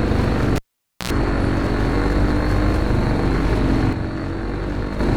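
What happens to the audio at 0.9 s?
At 0.9 s the cable is pulled and plugged in (0.55–1.10 s): a pop, 0.5 s of near silence, 72 ms of 60 Hz mains buzz from the touching tip, then another pop. That buzz sets it apart from a plain dropout.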